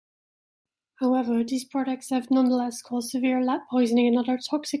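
The speech contains no audible technical faults.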